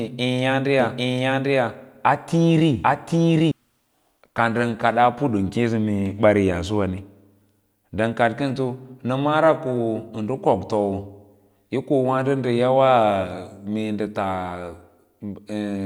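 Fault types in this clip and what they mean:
Doubled audio track: from about 0.8 s to 3.5 s the speech is heard twice, with a second full-band copy trailing roughly 0.7 s behind and sitting at about the same level as the original. It's a clean duplicate with no decay or room colour, and it drops in and out abruptly at those edges, so it isn't an echo. The likely cause is the signal being picked up again through a slower path, or an edit leaving two offset copies stacked.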